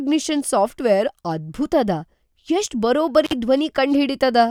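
At 3.25 to 3.33 s, an intermittent contact briefly breaks the line for about 45 ms: crackly edges, faint hiss, a near-flat waveform gap flanked by broadband spectrogram spikes.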